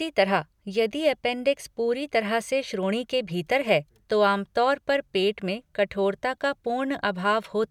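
No technical faults are audible.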